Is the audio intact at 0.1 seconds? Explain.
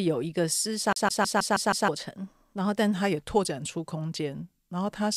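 Yes, the speech at 0.1 seconds is intact, with no dropout, click, distortion or other fault at that moment.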